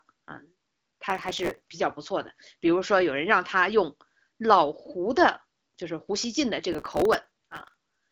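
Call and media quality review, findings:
Processor overload crackle, 1.10 to 1.65 s: gritty tearing on the speech, then clean. Audio engine missing deadlines back to back, each miss repeating stale audio with hard edges; the grain fits buffers of a few milliseconds, a few dozen missed in a row.

Same crackle again, 6.7 to 8.0 s, longer run. Same cause, load spike on the processor. The AMR-WB path at 12.65 kbit/s sits underneath it, top end stopping near 7.7 kHz.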